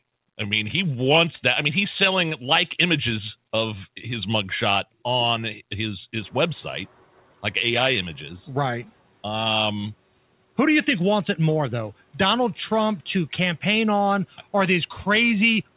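Around 6.0 s the room noise jumps by about 20 dB. At 6.21 s, just after "his mugshot on his", the noise suppressor is catching up. For 0.36 s the noise passes with little reduction. Then it sinks by about 6 dB as the estimate adapts.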